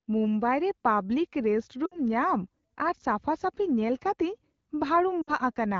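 At 1.85 to 1.99 s and again at 5.21 to 5.32 s, the speech shows lost AMR speech frames. Each gap sounds like a run of about 60 ms, which fits three 20 ms frames. The decoder fills it by repeating the last good pitch and vocal tract shape at falling gain, so the sound smears into a brief buzzy drone and fades. Wideband harmonics up to 6.4 kHz flatten into static horizontal streaks, then thin to near silence. The waveform envelope tapers steeply, and speech resumes weak and rough for a moment.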